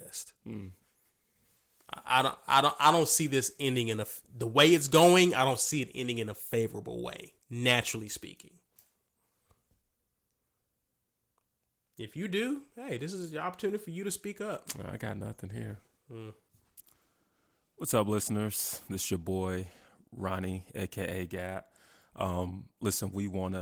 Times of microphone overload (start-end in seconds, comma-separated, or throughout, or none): none